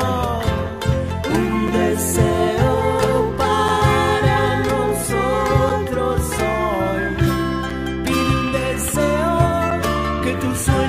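At 1.68, 3.68, 5.69, 7.70 and 9.71 s there's a short hard-edged hole of about 7 ms, a gap between chunks. The audio arrives in 2-second pieces and silence is slipped in at each join, so nothing's lost, but the sound stutters on that steady beat.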